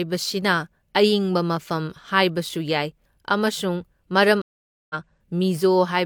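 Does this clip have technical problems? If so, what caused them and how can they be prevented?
Yes. At 4.42 s the speech drops into about half a second of silence, and when it returns at 4.95 s it has skipped ahead by roughly 0.4 s, with the first instant faded in. This is a stream reconnect: the connection broke, the player fell silent, then rejoined the live stream at a later point and started a fresh decoder there. Larger client buffering with automatic retry before playback runs dry would prevent it.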